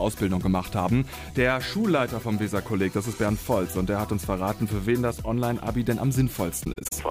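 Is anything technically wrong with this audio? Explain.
Yes. AAC frame loss with muting occurs from 6.64 to 6.93 s, near the end. The decoder lost a cluster of AAC frames and replaced each one's spectrum with silence. About 149 ms of audio drops out, scattered over roughly 277 ms, with the longest single gap around 40 ms. Because overlapping transform windows blend neighbouring frames, each hole fades out and back in rather than cutting abruptly. The sound stutters through a series of brief, soft-edged dropouts.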